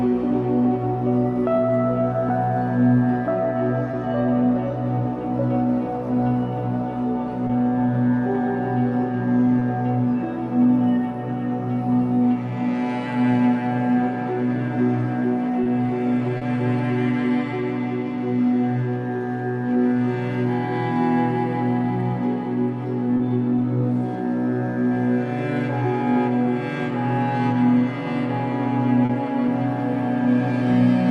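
Short concealed packet loss occurs at 3.91, 7.47, 9.59, 15.63, 16.37, 23.17 and 29.05 s. Each event lasts 20 ms, except those at 16.37 and 29.05 s, which run to 40 ms. In each gap, audio arrived too late for the decoder, which extended the preceding sound before blending back, leaving a brief smear or wobble. The call path's top end stops near 12 kHz, which fits an Opus call codec.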